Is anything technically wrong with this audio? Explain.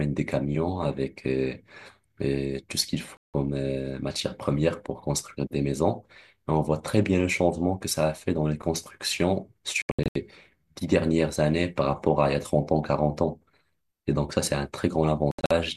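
Yes. The speech drops out to silence three times: one clean gap of about 168 ms at 3.18 to 3.34 s, then broken patches of short holes at 9.82 to 10.16 s (240 ms lost, longest hole 72 ms) and 15.31 to 15.51 s (144 ms lost, longest 72 ms). This is digital broadcast dropout. The receiver muted when frames arrived corrupt or missing, so that audio is gone rather than damaged.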